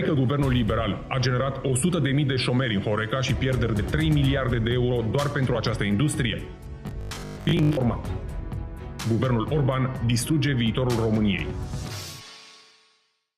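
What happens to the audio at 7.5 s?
From 6.87 to 7.77 s, audio likely arrived too seldom, so 20 ms chunks repeated: robotic sound from repeated short buffers, a rigid 50 Hz metallic buzz.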